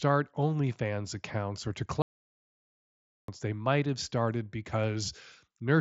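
A speech recording, carried over a wideband Bluetooth headset link whose mSBC coding leaves nothing above about 8 kHz, drops out completely just after "accounts or to", at 2.02 s. The silence lasts about 1.26 s, to 3.28 s, before the audio returns. This is a playback stall, likely caused by the player running short of buffered data or its output thread being blocked, so no samples reached the output for that stretch.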